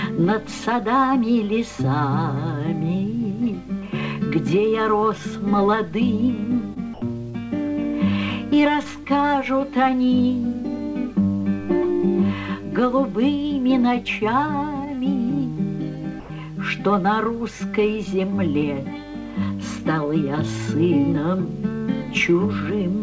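At 6.74 to 6.78 s, short concealed packet loss leaves a brief smear. About 20 ms went missing, and the decoder stretched the previous sound over the gap.

From 6.94 to 7.02 s, the sound gives way to steady comfort noise for 80 ms. This is likely sound dropped by the voice detector.

At 7.30 to 7.36 s, a second concealed packet loss smears 40 ms.

From 16.20 to 16.30 s, comfort noise again replaces about 90 ms of sound, likely a second voice-detector dropout.

Nothing is heard above 8 kHz, which fits a G.722 call codec.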